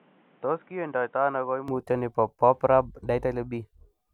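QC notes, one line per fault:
0.0 to 1.68 s, input switched to a poorer device: the speech opens dull and boxy with nothing above 3.8 kHz, a bit quieter and over faint new background noise, then clears up with no gap, likely the system starting on a narrower-band microphone before switching over.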